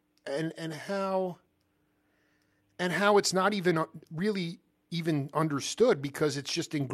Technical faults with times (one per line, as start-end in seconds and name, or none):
none